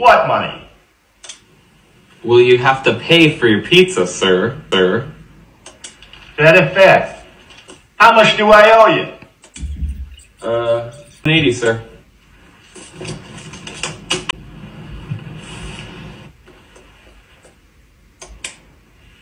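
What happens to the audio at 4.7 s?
At 4.71 s there is a CD skip. The laser lost its track, jumped to another turn of the disc's spiral, and the player muted for a few milliseconds. That brief mute is heard as a tick, and playback resumes from a different point on the disc.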